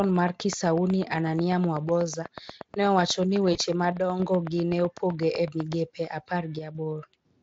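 From 0.04 s to 5.74 s a train of clicks runs under the speech: about 50 near-identical pulses at a regular 8.1 per second, ticking through pauses as well as speech, some peaking roughly 10 dB above the signal. The likely cause is interference from nearby equipment or a faulty connection or power supply. On a waveform it shows as evenly spaced thin spikes standing above the envelope. A spectrogram shows a picket fence of full-height vertical lines.

At 3.53 s to 3.58 s there is VoIP packet loss concealed by the speech codec. The audio points to one lost 20 ms frame. The decoder filled the gap by extending its last pitch and spectral shape at falling gain, so the sound briefly turns buzzy and dull, and stays weak for a few tens of milliseconds after real packets resume. A spectrogram shows smeared, flattened harmonics where detail should change. The waveform shows a short repetitive stretch with a tapering envelope.

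One channel drops out twice, from 3.92 s to 4.20 s and from 6.59 s to 6.75 s. Once folded to mono, the shared content falls abruptly by 6 dB, so the speech suddenly sounds quieter, then jumps back. The waveform shows a clean step down to half amplitude with sharp edges. A spectrogram shows the whole band dimming uniformly. The Speex encoding underneath adds only light coloration.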